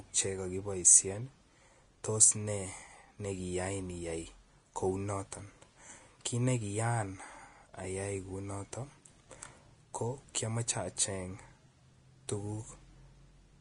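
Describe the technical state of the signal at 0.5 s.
At 0.5 s the speech sounds hissy and grainy with nothing above 10.6 kHz, as it does throughout. That's likely Vorbis compression at a low bitrate around 32 kbps, with the treble replaced by noise.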